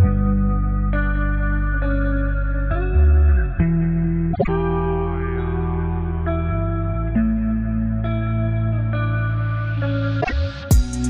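A brief garbled flutter breaks in at 4.33–4.49 s, and a shorter one at 10.21–10.32 s. Both are frames out of order: adjacent blocks of about 52 ms and 26 ms were swapped, so each stretch plays its halves exchanged without losing time.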